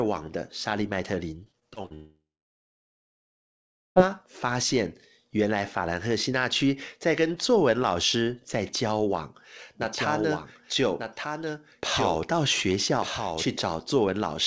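Speech carried over a call path, band-limited with nothing above 8 kHz, which fits a wideband codec such as G.722, and it shows three distinct faults. From 1.44 to 1.92 s there is repeated packet loss (robotic sound): six short holes, the longest 45 ms, are each patched by stretching the preceding audio, so about a quarter of that half-second is synthetic fill. The result is choppy, with fragments audibly missing between the patched pieces.

Immediately after, from 1.94 to 3.99 s, the audio cuts out in a long network dropout, likely a stall in delivery rather than a local fault. The last sound is briefly extended as a decaying buzz, then roughly 1.7 s of near silence follows before the signal resumes, with about two seconds of the original simply gone and nothing replayed to cover it.

From 9.82 to 13.46 s the clip carries a doubled audio track: a second full-band copy of the same speech runs about one second behind the original and sits about 5 dB lower. 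It has no reverberant tail or room colouring, and it switches in and out abruptly at both ends, which points to a likely second capture path or an editing overlap rather than an acoustic echo.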